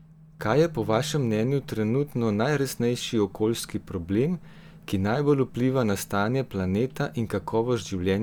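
No technical faults can be heard anywhere in the recording, and the signal holds steady throughout.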